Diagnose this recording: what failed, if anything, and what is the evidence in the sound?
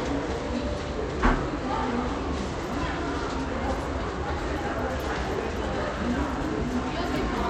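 Bluetooth SBC compression, throughout the clip, is the likely cause of the plainly audible codec damage, placing the failure at the codec stage. Nothing reaches above 17.2 kHz, and what treble remains sounds thin and unstable, with a gritty, coarse texture riding on the sound. The damage suggests a low bit pool, around 96 kbps. The encoder splits the signal into a few wide bands and, short of bits, starves the upper ones and quantises the rest roughly, leaving grain and aliasing behind.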